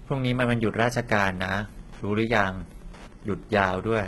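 Throughout, the speech is likely HE-AAC compression at a bitrate that sounds near 16 kbps: rebuilt treble ends at 11.8 kHz, and s sounds come out gritty and metallic. From 0.65 to 3.79 s, Wi-Fi interference from a nearby radio is rectified into the audio path, adding faint ticking every 102.4 ms, well below the speech.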